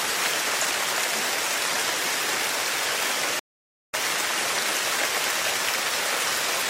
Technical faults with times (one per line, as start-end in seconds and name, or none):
3.39-3.94 rebuffering stall